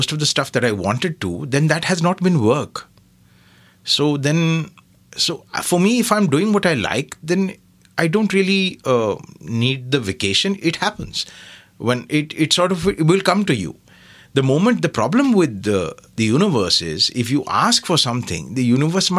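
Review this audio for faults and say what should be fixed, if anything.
No faults turn up in this audio, so nothing needs to be fixed.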